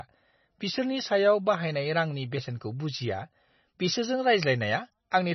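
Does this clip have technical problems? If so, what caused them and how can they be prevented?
Yes. Throughout the speech there is no content above about 5.9 kHz, and the sound has a watery, swirling quality with smeared consonant onsets. This is likely MP3 compression at a very low bitrate, consistent with roughly 24 kbps. Short of bits, the encoder cut the treble at a fixed point and dropped weaker frequency components, which flicker in and out between frames. Encoding at a higher bitrate, or using a lossless format, would prevent it.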